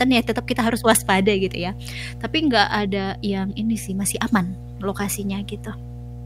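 Mains hum runs under the speech from start to finish. It is a steady low tone at 60 Hz, with a few weaker harmonics above it. The power line has leaked into the signal, through a ground loop or a nearby transformer. The hum does not change or pause. It sits quite high, roughly 15 dB below the speech. So it is plainly audible in the gaps between phrases, as a constant buzz.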